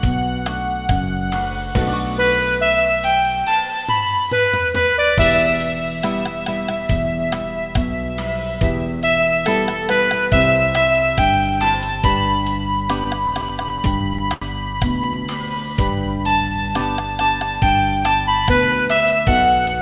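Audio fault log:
13.04–14.43 s, repeated stalls (stutter): the sound halts and resumes about a dozen times in a row as packets arrive late and the jitter buffer runs dry. Each gap is bridged by continuing the last sound, about 204 ms in all and roughly 15% of the span, the longest stretch 79 ms and faded; nothing is lost, but the flow drags. A spectrogram shows short smeared, repeated columns, and the longer fills taper in the waveform envelope.
15.07–16.81 s, jitter buffer slow-down: the audio plays at about 89% speed with its pitch unchanged, adding some 205 ms. The receiver rebuilds its reserve by repeating single pitch periods or slivers of pauses many times over, so sounds are drawn out. On a spectrogram, harmonics keep their spacing while events stretch in time; the waveform shows copied, near-identical periodic cycles laid end to end.
18.72–19.81 s, jitter buffer speed-up: the audio runs at about 109% speed at the same pitch and sounds hurried, losing roughly a tenth of a second. 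An overfull buffer is trimmed by cutting out short runs of one or a few pitch periods again and again. In the waveform, cycles are dropped at spliced joins. On a spectrogram, events compress in time with harmonics unmoved, all beneath the call path's ceiling, with nothing above 4 kHz, which fits G.711 mu-law at 64 kbps.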